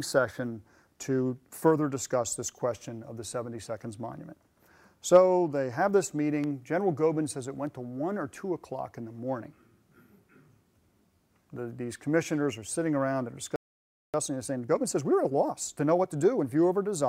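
At 13.56 s the sound just drops out and stays silent until 14.14 s, a gap of about 580 ms, then carries on. That's a playback stall. The likely cause is the player running dry of buffered data or its output thread getting blocked for a moment, so nothing reached the output until it recovered.

Straight after, from 14.14 s to 16.44 s, you get time-compressed catch-up. The player is working off the backlog the stall left behind by snipping out tiny slices and cross-fading across the joins, running at roughly 1.25 times normal speed. Pitch stays where it should be, but those two-odd seconds come across as rushed.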